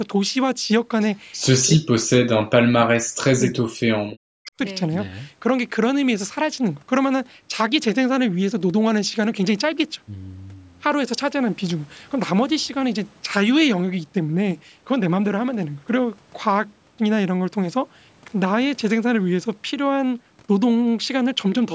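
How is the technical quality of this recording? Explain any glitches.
The recording has two kinds of call-processing glitch in the first few seconds, both typical of a speakerphone-style call. The speech tops out at 8 kHz, as you'd expect from call microphone processing.

Echo leak shows up twice, briefly: 1.01 to 1.05 s and 4.11 to 4.15 s. Each is a faint delayed copy of the speech arriving 303 ms late, roughly 30 dB below the main speech the first time and a bit louder, around 25 dB down, the second time. The likely cause is a far-end loudspeaker whose echo canceller let a scrap of the pickup through, which then got sent back down the line.

Speech suppressed in double talk runs from 1.65 to 4.51 s, about three seconds in total. The talker's level ducks hard, at its deepest by something like 40 dB, so the speech sounds pushed away or chopped. This most likely happened because both ends were talking at once, and the echo canceller, unable to tell the local voice from the loudspeaker echo, turned everything down together.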